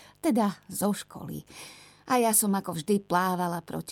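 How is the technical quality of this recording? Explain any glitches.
The recording carries a mains buzz for its entire length. Electrical interference from the 50 Hz supply has leaked into the signal path, most plausibly through a dimmer, a rectifier or poor shielding, which injects sharp switching spikes twice per mains cycle. Those spikes produce a dense ladder of harmonics stacked on 50 Hz and reaching into the low kilohertz range. The result is a steady, raspy buzz under the speech, sitting around 40 dB below it: faint, but constant.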